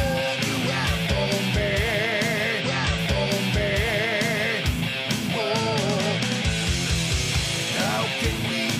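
At 2.60 s there's a stream segment repeated: the player queued the same chunk twice, so about 2.0 s of sound, up to 4.60 s, plays over again. You'll catch a small blip right where it jumps back to replay.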